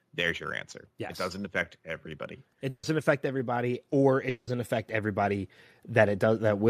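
Automatic gain rising affects this speech recording from 2.02 s through to the end. The gain control judged the input too quiet and kept raising its amplification step by step, so the voice and the background noise beneath it swell together rather than the voice alone getting louder. Over those last few seconds the whole sound grows steadily louder. At 2.69 to 2.85 s a burst of packet loss occurs. A short run of packets failed to arrive in time for playback, and the receiver covered the gap by extending the last sound it had and turning it down, producing about 140 ms of synthetic held buzz or fading hiss. When real audio resumes, it picks up roughly 140 ms later in the speech, so that stretch of the original is simply gone. A longer interruption runs from 4.29 to 4.49 s, likely a long network dropout in which nothing reached the receiver for a sustained stretch. What can be heard is about 180 ms of concealment sound, a continued and fading echo of the preceding audio with no true silence in it. 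After that, the speech returns further along, missing around 180 ms of what was originally there.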